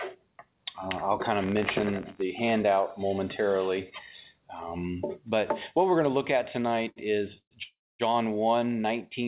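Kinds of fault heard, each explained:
Buffer tearing: the output buffer's writer and reader have slipped, so each period carries a tiny slice of sound about 20 ms old with hard joins. From 1.42 to 2.22 s this makes an 86.1 Hz rattle, fitting a 512-sample buffer, seen as evenly spaced vertical streaks.
Short stall from a late packet: at 6.89 s a packet arrived late, so the receiver stretched the last sound for 70 ms, then resumed from the same point with nothing lost. The waveform shows a briefly repeated stretch, and the spectrogram shows a smeared horizontal band.
Call audio freeze: at 7.38 to 7.54 s and 7.63 to 8.02 s the sound is held as a fading buzz, falls silent for 80 ms and then 250 ms, and resumes where it stopped, likely from late packets. Flat waveform gaps and blank spectrogram columns appear there.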